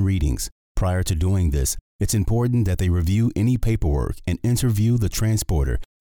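No technical faults are audible anywhere in the audio.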